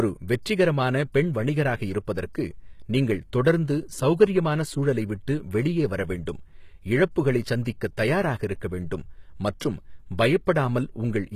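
From start to finish the speech shows plainly audible HE-AAC compression damage, likely from a low bitrate around 20 kbps: the treble is rebuilt from copied lower bands, so sibilants sound gritty and metallic, with nothing above 14.9 kHz.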